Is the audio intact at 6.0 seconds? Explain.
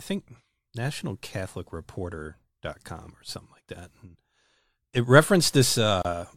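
No: a gap at a join of encoded pieces opens from 6.02 to 6.05 s, a 30 ms gap where separately encoded segments were spliced with untrimmed encoder delay and padding.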